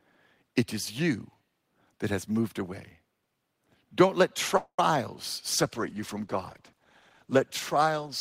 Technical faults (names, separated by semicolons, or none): call audio freeze; call bitrate drop